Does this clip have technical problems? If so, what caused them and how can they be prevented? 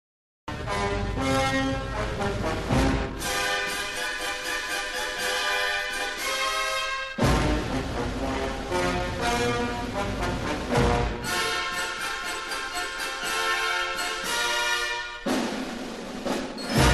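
Yes, a cut-off start. The clip holds digital silence until 0.48 s, then enters mid-sound with no attack. Capture began late. Start recording before the sound begins.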